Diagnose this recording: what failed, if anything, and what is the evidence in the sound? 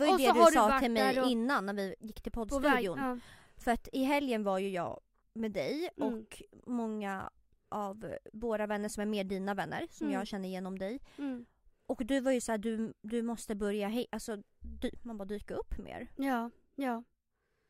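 Listening through the recording, nothing stood out as a failure at any stage.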